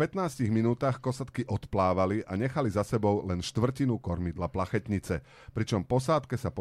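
Speech throughout, with nothing technically wrong to point to: no dropout, gap, distortion or timing disturbance appears anywhere in the recording.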